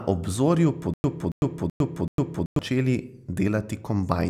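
From 0.94 to 2.59 s the speech falls into a stutter with silent gaps. A 278 ms burst repeats four times, each followed by about 103 ms of dead silence, every 381 ms. The likely cause is a stalled stream replaying its last fragment. The speech meant for that span never plays.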